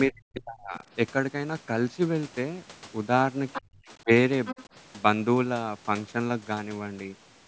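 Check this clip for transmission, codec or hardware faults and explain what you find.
Two echo-cancellation faults are present, both tied to the far end's audio playing on the loudspeaker.

Speech suppressed in double talk, from 0.08 to 0.82 s and from 3.59 to 4.08 s: the canceller likely mistook overlapping talk for echo and clamped down, so the voice drops by around 40 dB.

The other side's voice leaking through, at 3.53 to 3.61 s and 4.45 to 4.65 s: residual loudspeaker echo likely escaped cancellation, leaving a second voice roughly 10 dB below the talker.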